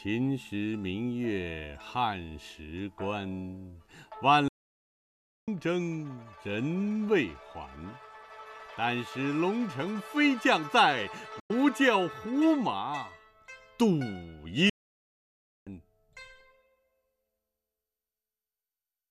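At 4.48 s the sound halts for about one second until 5.48 s, and again from 14.69 s to 15.67 s, pausing mid-flow before continuing. Each is a playback stall, likely the player running short of data or its thread being blocked. At 11.39 s a digital broadcast dropout mutes the audio with an 8 ms fade, leaving a 96 ms hole until 11.51 s. This points to roughly four corrupt frames, and the material in that gap is lost.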